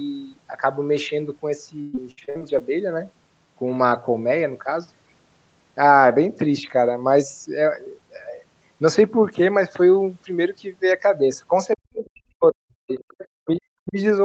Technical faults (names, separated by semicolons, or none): repeated packet loss (robotic sound); speech suppressed in double talk; other side's voice leaking through